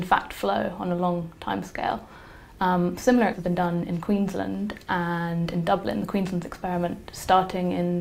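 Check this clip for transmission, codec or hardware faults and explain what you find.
Two transmission faults are audible, with the second following closely on the first.

At 3.33 s there is a skip ahead: the sound jumps forward with no gap, and roughly 0.4 s of audio is missing. That stretch was dropped while later audio was already queued, so the two sides of the jump are joined directly. Unlike a dropout or packet-loss concealment, there is no silence, buzz or smeared fill, only an abrupt discontinuity where material has vanished.

From 3.43 to 4.49 s comes a jitter buffer speed-up. With more audio buffered than it wanted, the receiver trimmed many short pitch-period pieces in succession, removing about a tenth of a second in total and running the sound at 110% speed. The pitch stays the same while the timing feels hurried. That distinguishes it from a clock or sample-rate mismatch, which would raise the pitch along with the speed, and from a skip, which removes one block at once rather than spreading the cut over a second.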